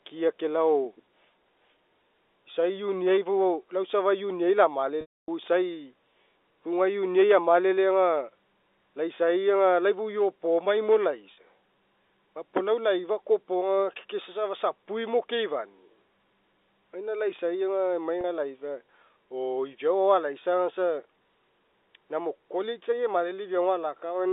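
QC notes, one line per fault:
5.01–5.28 s, 11.34–11.37 s, 18.21–18.24 s: packet loss with pitch repetition. Packets were lost and the receiver looped the last pitch period to fill each gap. The 270 ms gap fades to silence before speech cross-fades back. The two 30 ms gaps give a brief buzzy hold.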